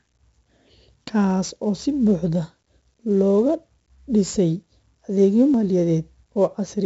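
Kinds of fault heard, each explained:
4-bit ADPCM compression: Present throughout the whole clip, heavily. Each sample is coded as a small 4-bit step away from a predicted value, with the step size adapting as the speech moves. The resulting error rides some 20 to 30 dB under the speech as a gritty hiss that swells with every loud syllable and roughens sharp onsets. Nothing reaches above about 7.7 kHz, which leaves the speech dull and fits a 64 kbps stream at a 16 kHz sample rate.
Audio missing between chunks: At 5.54 s the speech jumps abruptly forward. Roughly 40 ms of sound is gone, and the material on either side is butted together with no gap, so it comes across as a skip rather than a pause. The likely cause is a recorder or processor working in 3 s chunks that drops a short slice while closing one block and starting the next.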